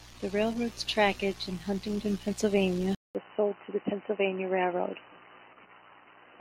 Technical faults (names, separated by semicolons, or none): input switched to a poorer device